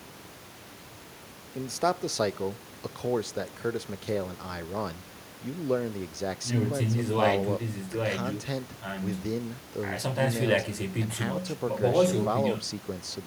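Nothing stood out on listening to this speech, with only the room's own background noise sitting about 15 dB below the voice.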